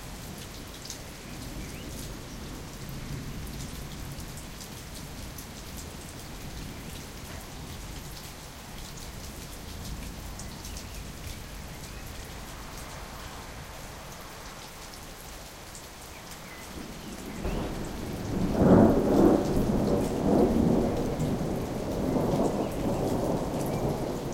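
At 4.90 s the sound jumps forward, with about 40 ms missing. Smaller jumps of about 10 ms each follow at 8.99 s, 12.26 s, 15.81 s and 18.04 s. Each is a quick jump with no gap of silence. The sound simply skips ahead. This is likely a dropped buffer (overrun). The hardware overwrote samples before the program collected them. The remaining audio on either side was spliced straight together.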